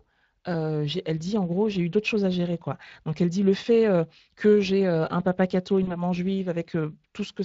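From the start, the whole clip carries Speex codec damage. The speech sounds noisy and hoarse because the CELP coder is short of bits for the excitation. The level of damage fits a mid-range setting of about 20 kbps.

At 5.83 s, right after "euh un papa catho", about 40 ms went missing, which fits two lost frames. This is VoIP packet loss concealed by the speech codec. The decoder stretched its last pitch and filter into a fading sound, and the speech stays weak or distorted until about 6.0 s.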